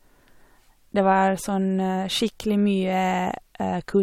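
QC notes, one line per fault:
No faults heard.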